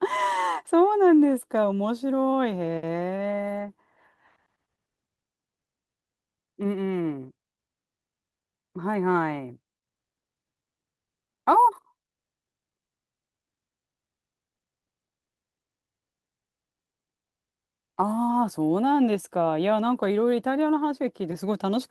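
No faults found in this speech recording: nothing audible to flag anywhere in it.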